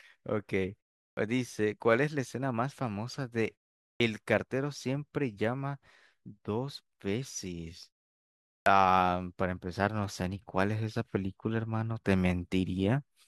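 A speech recording with a clipped start after a pause at 1.13, 3.96 and 8.62 s. Each time, after a gap of 0.39 to 0.78 s, the output device nods off and needs about 41 to 42 ms to wake, so speech jumps in abruptly, minus its opening sound.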